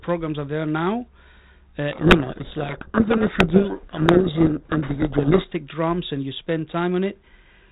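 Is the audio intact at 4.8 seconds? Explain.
No, a codec payload misread runs from 1.92 to 5.51 s: the G.726 code words are unpacked in the wrong bit order, burying speech in harsh distortion until "drums and you spend".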